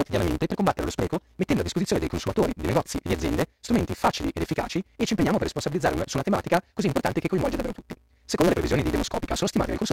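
Throughout the clip, a block size mismatch (truncated) means one stage hands over longer blocks than the next reads, dropping each block's tail, which fits a 256-sample read. The speech runs 1.88 times fast at near-normal pitch, under a steady 172 Hz buzz.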